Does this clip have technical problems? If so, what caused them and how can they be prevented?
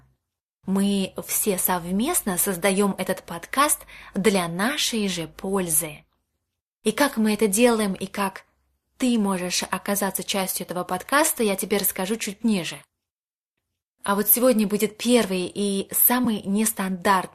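Yes. At 16.25 s there is an AAC frame loss with concealment. About 10 ms of audio, which fits a single dropped frame of what is likely low-delay AAC, was rebuilt by the decoder from the previous good spectrum, leaving a short smeared, noisy patch. On a spectrogram it shows as a thin vertical strip of blurred energy. The waveform shows a tiny stretch of altered texture rather than a silent gap. Forward error correction or redundant frames on the transmission path would prevent it.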